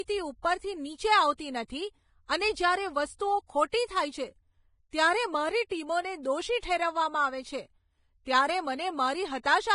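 Vorbis compression affects this speech clip throughout: nothing remains above 10.6 kHz and the treble is heavily grainy and hissy, likely from low-bitrate coding quantising fine detail into noise.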